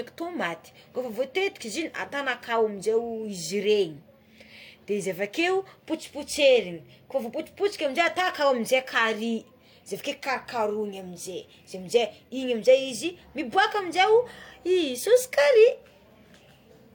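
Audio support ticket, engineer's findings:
Transcoding between lossy codecs, throughout: likely an MP3 encode re-encoded as HE-AAC. The second codec spends bits on the first's artefacts, so both sets are heard together. Nothing above 20.3 kHz.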